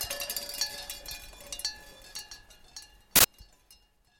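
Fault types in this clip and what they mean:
Uninitialised buffer: A block of audio was sent to the output before any sound had been written into it. Whatever data sat in that memory was played back as if it were samples. Here it comes as a short, loud burst of digital noise from 3.16 to 3.24 s. The burst lasts about 85 ms. That length fits one 4096-sample block, so a single block of leftover memory reached the output.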